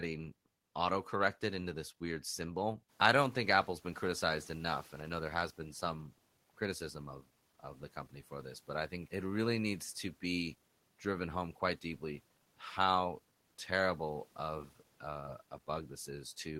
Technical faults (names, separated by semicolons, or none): noise suppressor catching up